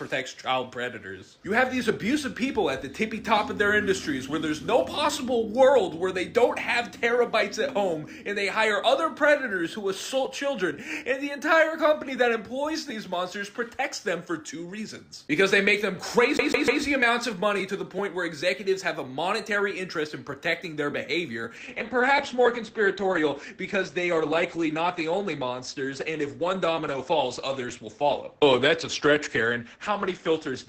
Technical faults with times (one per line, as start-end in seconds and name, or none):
16.37-16.83 CD stuck on one turn
21.57-30.69 adaptive stream at a lower bitrate